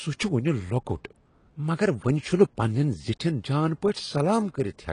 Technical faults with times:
0.00-4.93 AAC compression

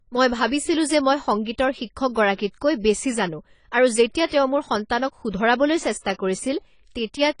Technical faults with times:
0.00-7.40 AAC compression
1.45 pre-echo
4.26-4.32 pre-echo

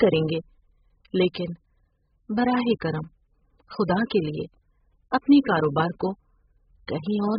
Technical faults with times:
0.00-7.38 AAC compression

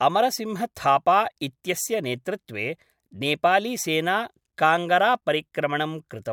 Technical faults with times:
none

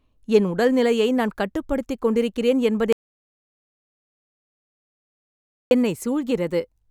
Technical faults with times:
2.93-5.71 audio dropout to silence

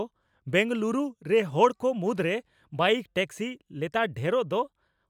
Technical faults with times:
none

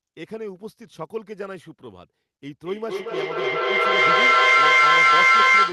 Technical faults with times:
2.65-5.72 feedback echo between two devices

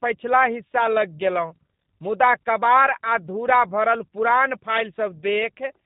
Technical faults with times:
0.00-5.85 G.729 codec

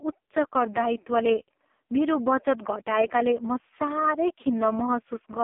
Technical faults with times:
0.00-5.43 AMR narrowband mobile codec

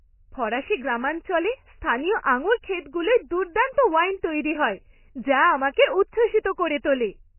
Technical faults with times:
0.00-7.38 MP3 compression

